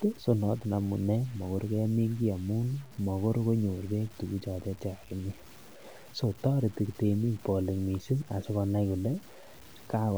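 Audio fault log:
throughout, low bit depth without dither: the speech carries a coarse, grainy distortion that rises and falls with the voice, sitting roughly 25 dB under the signal and leaving quiet stretches gritty or sputtering into silence. This is likely from samples truncated to very few levels, on the order of 7 bits, without dither. Unlike added hiss or dithered noise, the grain stops when the sound stops, because the error is tied to the waveform.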